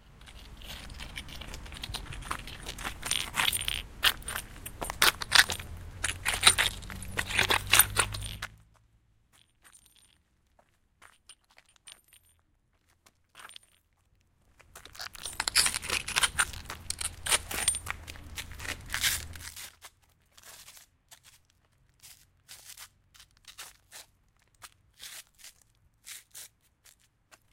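A recording of sounds with zipper noise from 19.32 to 19.69 s. Across that span the level falls by roughly 25 dB in unsmoothed 6 dB jumps, about ten per second. Each jump abruptly rescales the waveform, leaving a small click, so the fade is heard as a rapid ticking riding on the sound instead of a clean slope.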